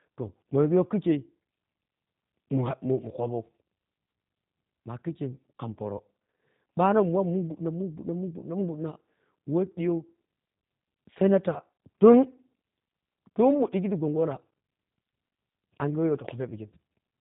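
Speech, and the whole thing has been squeezed through a G.729 codec, which you can hear right away. The top end is gone, with nothing above roughly 3.8 kHz. The voice has that slightly buzzy, synthetic roughness you get when the codec rebuilds speech from a vocal-tract filter, a pitch predictor and a handful of pulses per short frame. The damage is plainly audible from start to finish, and it fits an 8 kbit/s G.729A stream.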